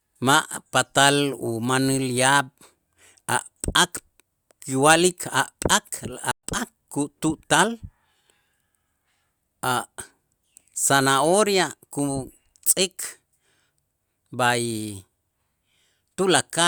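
A playback stall at 6.31 to 6.43 s cuts the speech to silence for 120 ms, most likely because the player ran short of data before resuming.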